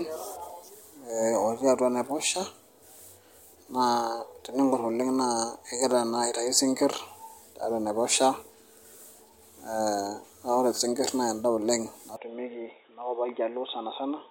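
At 12.16 s the speech abruptly turns dull and boxy, with nothing above 3.8 kHz, and stays that way to the end. It drops a few dB, with a fresh noise floor well below the signal and no gap at the change. The likely cause is an input switched to a poorer device.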